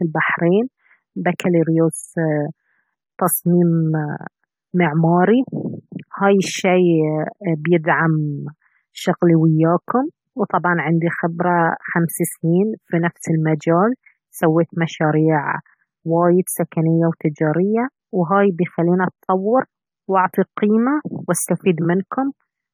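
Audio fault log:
Throughout: generation loss. The speech sounds swirly, hollow and smeared, with blurred attacks, worse than one AAC pass near 64 kbit/s would leave. It likely comes from about seven re-encodes on shifting frame grids, each adding fresh quantisation noise and spectral holes.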